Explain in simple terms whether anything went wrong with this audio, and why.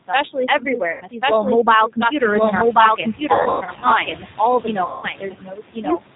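Yes, a few things went wrong, and they stack on top of each other.

The biggest oddity is a doubled audio track. A second full copy of the speech runs about a second behind the first, at about the same loudness, with no echo tail or room sound on it. It's likely from the audio being picked up twice along a slower route, or from an edit that left two out-of-step copies in the mix.

The whole clip went through the G.729 codec, a low-rate phone-call codec that rebuilds speech from a simple model of the voice instead of sending the sound itself. Nothing above 4 kHz gets through, so it sounds muffled, a bit rough and synthetic throughout.

You'll also hear noise suppressor artifacts all the way through. The suppressor keeps pushing the steady background hiss down frame by frame, so the noise drops away in the gaps and comes back under the speech.

That same suppressor also causes speech cut by the noise suppressor. 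From 0.08 to 2.22 s, and again from 2.72 s to the end, it mistakes bits of speech for noise. Soft consonants and word endings get turned down and sound swallowed. That adds up to roughly half a second in the first stretch and about a second in the second.

Around 2 s the room noise itself gets noticeably louder, which is just the room and not a fault. The noise suppressor catching up then shows from 2.19 to 2.69 s. The louder hiss comes through with less reduction at first, then sinks over about half a second as the suppressor adjusts.

Finally, there's VoIP packet loss concealed by the speech codec in three places: 0.92 to 1.04 s (90 ms missing), 3.34 to 3.87 s (300 ms missing in bits spread over about half a second), and 4.85 to 5.09 s (180 ms missing). Each time, the decoder fills the gap by stretching the last sound into something that fades out, and the speech stays weak for a moment after.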